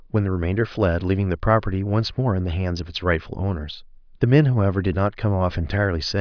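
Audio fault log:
No faults detected on listening; nothing to log for this speech recording.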